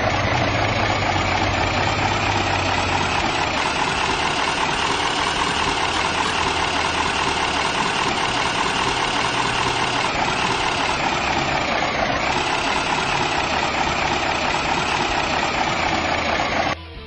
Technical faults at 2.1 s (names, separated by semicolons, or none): none